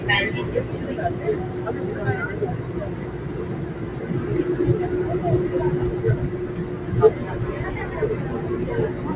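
Noise suppressor applied to sounds runs throughout. Steady ambience and decaying tails are mistaken for noise and pulled down by roughly 5 dB, so the sound pumps while attacks pass. Nothing above 4 kHz comes through, which fits a narrowband telephone codec such as G.711 on the call path.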